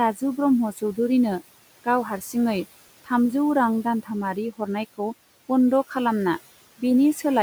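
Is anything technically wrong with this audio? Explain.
Yes, the speech has two problems, both from the noise suppressor.

Noise suppressor artifacts run throughout. It pulls the room noise down about 17 dB in the gaps, then lets it back under the voice.

Speech cut by the noise suppressor happens between 0.73 and 0.98 s. Mistaking quiet speech for noise, it dips by up to about 10 dB for roughly a tenth of a second, and that part sounds swallowed.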